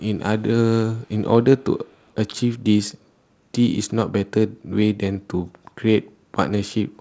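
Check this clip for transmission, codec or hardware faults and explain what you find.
There's one problem here: two short patches of echo leak, at 1.02 to 1.08 s and 1.85 to 2.12 s. In both you can hear a very faint delayed copy of the speech trailing about 151 ms behind the original, sitting way down in the background. The likely cause is a far end on loudspeaker whose echo canceller let a bit of its own mic pickup slip through and get sent back. The top end stops at 8 kHz, which fits a wideband call path such as G.722.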